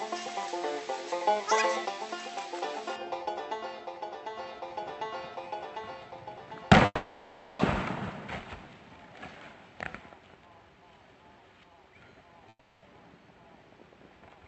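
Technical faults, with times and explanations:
6.85–7.61 s, call audio freeze: the last sound stretches into a fading buzz for 0.74 s, likely from delayed packets emptying the jitter buffer; playback then resumes with nothing missing.
12.49–12.84 s, long network dropout: a 0.33 s fading fill replaces audio, likely from packets never arriving, and playback resumes with about 0.36 s of audio gone.
14.14–14.44 s, jitter buffer speed-up: the receiver trims short pitch-period pieces, removing roughly 40 ms, so the sound runs at 112% speed with unchanged pitch.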